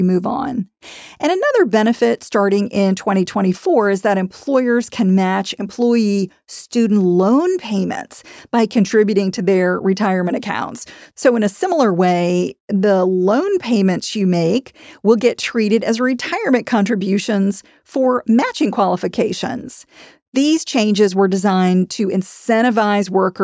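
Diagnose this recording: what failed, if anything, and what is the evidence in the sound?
Nothing failed: the sound offers no evidence of a fault at any stage.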